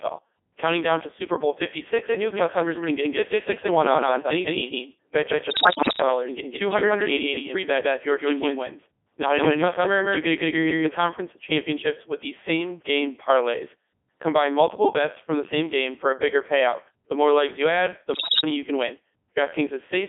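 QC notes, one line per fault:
Throughout: Codec 2 vocoder. The speech has passed through a very low-rate vocoder at about 3.2 kbit/s that transmits only pitch, voicing, energy and spectral envelope, then rebuilds the voice from sine waves. The waveform is lost, so the voice comes out robotic and buzzy, heavily mangled, and confined to roughly 250 Hz to 3.5 kHz.
2.07 to 10.89 s: doubled audio track. A second full-band copy of the same audio runs alongside the first, about 150 ms late and at roughly equal level, most likely from a slower second capture path. It starts and stops abruptly, ending just before "conference championships with the", and adds no decay or room colour.
5.50 to 6.02 s and 18.14 to 18.44 s: bit errors on digital voice radio. Heavy bit corruption, around 15 percent, hit the vocoder frames, so wrong pitch, level, voicing and spectrum values were decoded. The voice lurches in pitch and loudness and breaks into warbles and robotic gibberish. 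The second burst comes just after "legs you add the".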